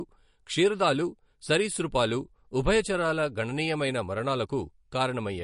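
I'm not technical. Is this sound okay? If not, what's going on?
No. Throughout the speech there is a swirly, watery quality and no treble above about 10.5 kHz. This is likely MP3 compression, which saves space by discarding detail it judges less audible.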